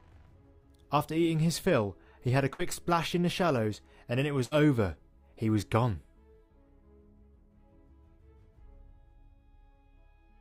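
At 2.53 s and again at 4.45 s there's a burst of packet loss. Each time, a run of audio never arrived in time, so the receiver papered over it by stretching out the last bit of sound and fading it down, about 56 ms of fill the first time and 62 ms the second. Playback then picks up roughly 60 ms further along, so you hear a short smeared tail followed by a small jump where that stretch is simply gone.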